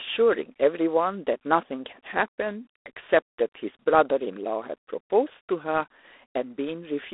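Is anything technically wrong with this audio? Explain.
Yes. Throughout the speech, the signal has passed through G.726 ADPCM coding at a low rate; the texture points to 24 kbit/s, three bits per sample. Instead of the waveform itself, the codec sends coarse steps of difference from an adaptive prediction, and with so few steps the error becomes a harsh, rasping hiss that swells and fades with the speech level. The line band runs from 300 Hz to 3.6 kHz, and nothing passes above 3.8 kHz, so the sound is thin and muffled.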